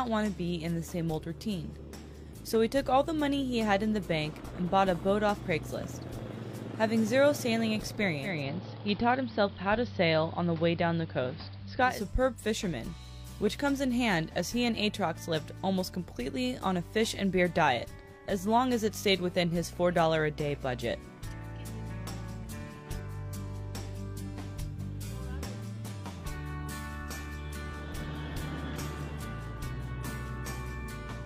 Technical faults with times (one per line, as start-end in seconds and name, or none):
8.19-12.04 digital radio blending to analogue